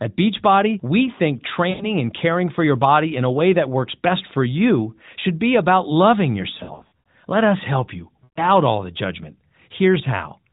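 At 1.70 to 1.91 s, 6.58 to 7.08 s and 8.24 to 8.46 s the speech smears and fades: lost AMR speech frames, with the decoder stretching the last good frame at falling gain. The middle event is broken and patchy. The spectrogram shows harmonics frozen into flat streaks dimming toward gaps beneath the narrowband 4 kHz ceiling, and the waveform shows a decaying envelope.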